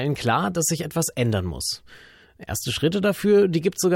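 No dropouts, clicks, distortion, level jumps or timing errors turn up anywhere in the recording; nothing to flag.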